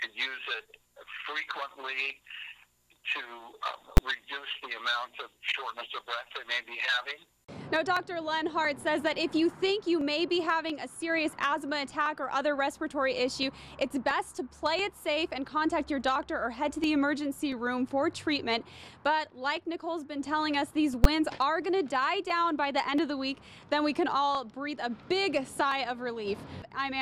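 A single sharp bang cuts through the sound at 3.97 s and again at 21.04 s. Both are invalid numbers at full scale: a calculation returned infinite or undefined values, pinning the output to its extreme for about 10 ms, too short to split into two pops.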